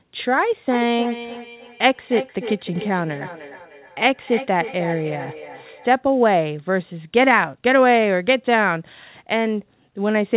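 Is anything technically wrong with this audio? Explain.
Yes. From 0.71 s to 5.99 s the speech returns as a trailing copy of itself roughly a third of a second later, reaching about 14 dB below the direct speech at its loudest. This is feedback echo between two devices. Two devices in the same room are on one call, and one plays back what the other's microphone sent. That microphone picks the sound up again, and its echo canceller ignores it because it only removes its own device's playback. The audio is limited to 4 kHz throughout, as expected for a narrowband telephone-style call path.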